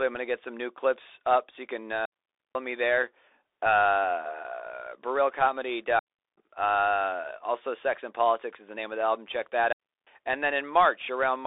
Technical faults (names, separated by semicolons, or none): Bluetooth CVSD headset codec; digital wireless dropout